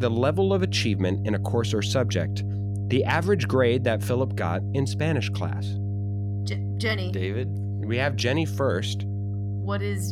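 From start to finish, mains hum sits under the speech: a steady 50 Hz tone, about as loud as the speech itself, from power-line current leaking in through a ground loop or nearby transformer. Its fixed pitch separates it from rumble, which wanders.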